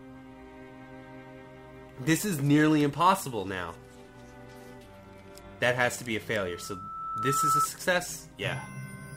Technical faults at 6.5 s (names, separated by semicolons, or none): loudspeaker feedback squeal